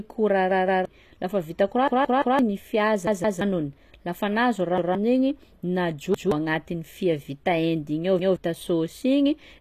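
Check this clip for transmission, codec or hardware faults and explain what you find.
Two faults are present: treble damage throughout, and six stutters from a repeated buffer.

Throughout, the speech has gritty, metallic high frequencies and nothing above 14.9 kHz. The likely cause is HE-AAC compression at 24 kbps, whose rebuilt treble does not match the original.

Repeated buffer stutters occur at 0.51–0.85 s, 1.88–2.39 s after "lafa vita", 3.07–3.41 s, 4.78–4.95 s, 6.14–6.32 s before "agnatin'ny fia vita hendy", and 8.19–8.36 s after "vita hendy igny ao". New audio arrived late, so a 171 ms chunk replayed with hard joins. That length fits an 8192-sample buffer. The chunk replays up to three extra times, and up to about half a second of speech is lost.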